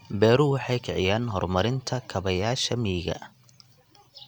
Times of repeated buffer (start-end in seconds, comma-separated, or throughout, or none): none